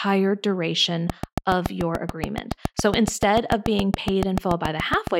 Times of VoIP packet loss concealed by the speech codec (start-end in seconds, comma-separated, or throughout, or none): none